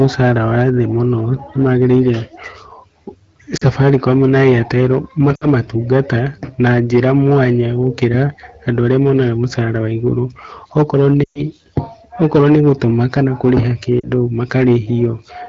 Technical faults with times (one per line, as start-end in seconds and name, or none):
0.00-15.49 hard clipping
3.57-3.64 lost AMR speech frames
5.35-5.46 lost AMR speech frames
11.24-11.41 lost AMR speech frames
14.00-14.11 lost AMR speech frames